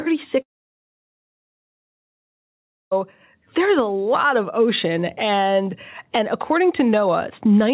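From 0.42 s to 2.93 s the speech cuts out. A brief fading buzz continues the last sound, then near silence holds for about 2.5 s before speech resumes further on, the lost stretch never played. This is likely a long network dropout, concealed briefly before falling silent.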